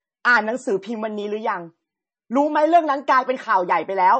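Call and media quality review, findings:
Watery, swirly speech throughout, smeared consonants. Likely MP3 compression at a starved bitrate, near 30 kbps; weak frequency lines dropping in and out between frames.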